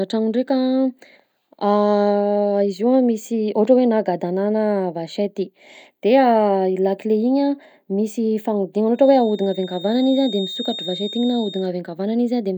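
From 8.91 to 11.72 s, a feedback whistle sits behind the speech. It is a thin, steady tone near 3.7 kHz, roughly 15 dB below the voice, swelling and fading slowly in level. The likely cause is a loudspeaker-to-microphone loop held just short of runaway.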